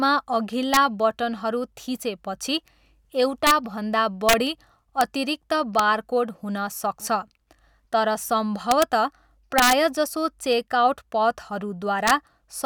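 Integer overflow: a gain stage in the speech path lets its integer samples run past full scale, and instead of being held at the limit they wrap to the opposite sign. Each loud peak that overshoots, from right at the limit to about 4 dB over, flips across the whole range as a violent crack, far sharper than clipping. Cracks occur at 0.74–0.77 s (before "बटनहरू थिचेपछि"), 3.47–3.51 s, 4.29–4.33 s, 5.01 s (before "अतिरिक्त बारकोड हुन"), 5.79 s (before "बारकोड हुन"), 8.71–8.83 s, 9.58–9.72 s and 12.08–12.11 s.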